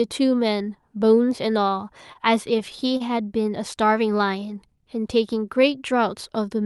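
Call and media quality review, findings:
Short stall from a late packet, 2.13–2.17 s and 2.97–3.02 s. Speech briefly held, with a faint buzzy smear. Probable component: jitter buffer underrun. Packet arrived late, so the receiver stretched the preceding audio about 22 ms, then about 31 ms, and resumed at the same point. Playout delay grew by the same amounts. Unlike packet-loss concealment, no audio is skipped: timing drifts later instead of content jumping ahead.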